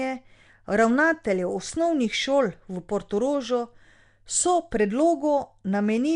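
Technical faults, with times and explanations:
Throughout: Nellymoser compression. The speech has a rough, hissy halo, a smeared underwater quality and nothing above 10.6 kHz. This likely comes from Nellymoser Asao coding near 44 kbps, which starves weak bands of bits and fills them with noise.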